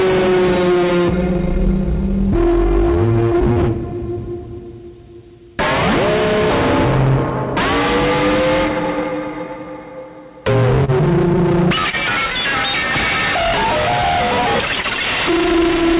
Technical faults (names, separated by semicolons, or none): short concealed packet loss